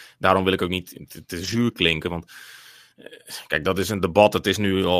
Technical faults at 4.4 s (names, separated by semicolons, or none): none